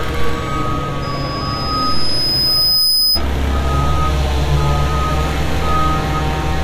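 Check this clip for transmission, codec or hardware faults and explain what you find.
There is one fault, a loudspeaker feedback squeal from 1.02 to 3.22 s. The microphone re-amplifies its own loudspeaker, so a steady 5 kHz tone swells over about two seconds until it is roughly as loud as the sound itself.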